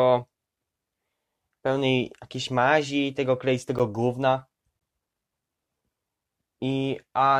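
At 3.79 s and 4.80 s, gaps between stream segments insert hard-edged silences of about 10 and 14 ms, one second apart, where segment timestamps failed to meet.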